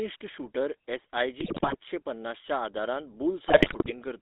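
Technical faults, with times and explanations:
Throughout: GSM full-rate codec. The speech is band-limited to about 250 Hz to 3.7 kHz. The lows are thin and the highs are dull. The codec damage is plainly audible. The coder models the vocal tract as a filter. It drives that filter with a sparse, regularly spaced pulse train rather than the true excitation. That crude excitation gives the voice a buzzy, gravelly grain. The character fits a 13 kbps full-rate stream.
1.4 to 1.75 s and 3.48 to 3.93 s: GSM bit errors. In both stretches the speech breaks up into squawks, pops and gargling. Corrupted bits reach the decoder. They alter the filter, pitch and gain values it rebuilds each frame from. A wrong filter bends the spectrum into strange shapes. A wrong gain makes the level jump suddenly. The second burst lasts longer and hits more frames. That suggests many consecutive frames were hit.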